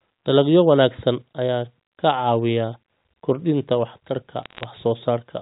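From 4.43 to 4.64 s the speech picks up crackle from bit errors on a digital phone line. Stray flipped bits, on the order of 0.2 percent, corrupt single G.711 mu-law samples, and those hitting a high bit or the sign of a loud sample give a sharp tick. These show as isolated spikes in the waveform and thin vertical streaks reaching the 4 kHz telephone band limit on a spectrogram.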